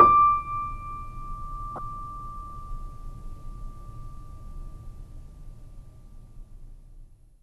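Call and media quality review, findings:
Corrupt frame decoded, 1.76–1.79 s: short chirpy burst in the music, about 30 ms. Spectrogram: brief smear with energy at frequencies the music doesn't occupy. Error peaking around -20 dBFS. Likely a few compressed frames with flipped bits, played anyway by the decoder.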